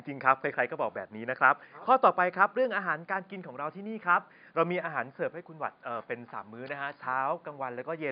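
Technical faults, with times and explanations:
No technical faults detected in this speech recording.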